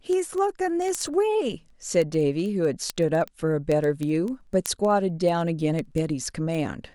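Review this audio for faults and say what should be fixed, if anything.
Word clock ticks run through the speech from 0.13 s to 6.92 s. There are about a hundred sharp ticks, one roughly every 70 ms. Each marks a point where the unlocked receiver's clock slips and drops or repeats one sample, suggesting a clock mismatch of a few hundred ppm. On a spectrogram they appear as evenly spaced thin vertical broadband lines, and on the waveform as tiny one-sample steps. Slave the receiving device to the sender's word clock, or use a sample-rate converter on the link, to prevent them.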